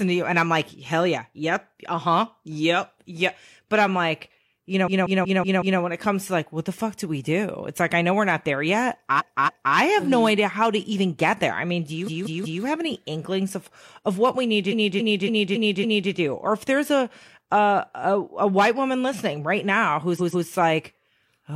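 Runs of compressed frames were written more than once, so the decoder replays the same slice of speech in a stuttering loop. The repeated frames sound at 4.83 to 5.76 s (a 186 ms block heard five extra times), 9.15 to 9.71 s (279 ms, twice more), 12.03 to 12.59 s (186 ms, three more), 14.68 to 16.07 s (279 ms, five more) and 20.16 to 20.45 s (139 ms, twice more), stretching the audio by about 3.7 s.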